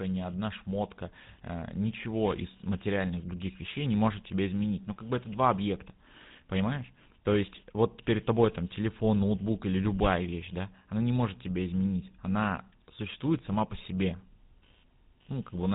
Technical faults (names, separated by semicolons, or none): computer activity noise; GSM full-rate codec